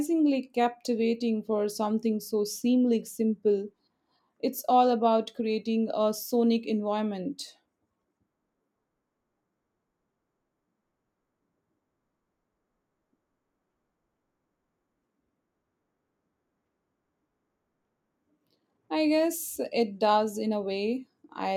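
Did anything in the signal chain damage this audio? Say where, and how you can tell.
No, nothing in this speech recording stood out on listening as damage from any stage of the signal chain.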